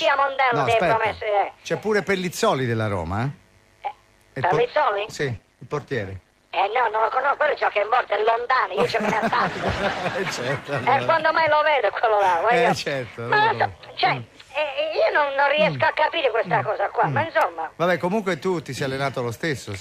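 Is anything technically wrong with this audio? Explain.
Yes. From 4.57 s to 10.47 s there is a call bitrate drop. The encoder's rate falls from 128 kbps to 12 kbps. At that rate the coding turns coarse and the high frequencies are cut. The sound dulls and roughens, then clears when the rate recovers.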